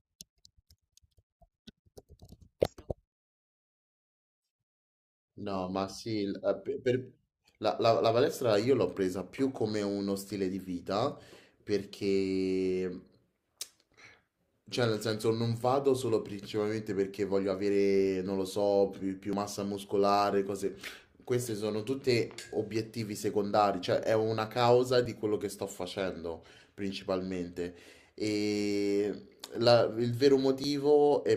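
Speech with three jumps at 19.33, 25.05 and 30.64 s, likely a dropped buffer (overrun), skipping about 40, 10 and 20 ms respectively without any silence.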